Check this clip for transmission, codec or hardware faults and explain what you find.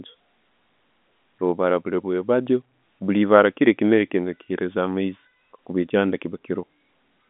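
No transmission, codec or hardware faults turn up in this speech clip, which carries the narrow band of an ordinary G.711 telephone line.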